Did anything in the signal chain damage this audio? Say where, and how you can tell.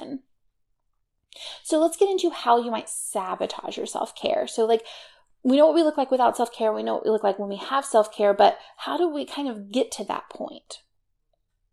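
No, nothing in the signal chain audibly damaged this speech recording; no stage from capture to playback has left any trace in the sound.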